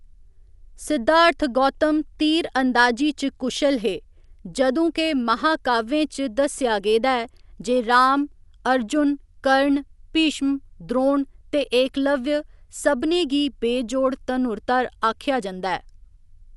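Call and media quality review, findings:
Speech dull and band-limited for the whole clip; nothing above 11.5 kHz. Rough, fluttering noise around tonal parts, codec damage plainly audible. Likely Dolby Digital compression at a low bitrate, consistent with about 64 kbps: encoder narrows the band, starves many frequency lines of mantissa bits, decoder fills them with dither noise.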